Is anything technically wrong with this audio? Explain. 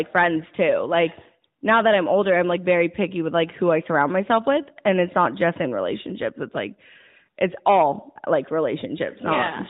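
No, nothing in this speech clip is technically wrong. It carries the narrowband sound of the AMR mobile codec, with nothing above 4 kHz and only a light synthetic edge that fits its highest 12.2 kbps mode.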